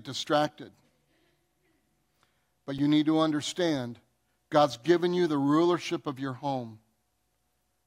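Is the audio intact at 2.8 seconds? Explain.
No. At 2.78 s, just before "you need to understand", there is a block of digital silence lasting about 2.9 ms, a gap consistent with a 128-sample buffer. A run of samples drops straight to silence and then resumes, with no fade on either side. The abrupt edges produce a discontinuity in the waveform, and because the hole is so brief it is heard as a tick or dip rather than a gap.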